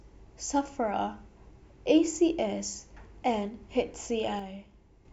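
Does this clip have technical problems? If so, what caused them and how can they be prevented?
Yes. From 4.39 to 5.05 s, near the end of this speech clip, one channel drops out, most likely because one side of the stereo feed was briefly lost between the source and the mix, perhaps at a loose connector or a failing input. Once the two sides are summed to mono, the sound shared by both channels falls abruptly by about 6 dB for roughly two thirds of a second, then returns. Secure cabling, and checking each channel's signal before summing, would prevent this.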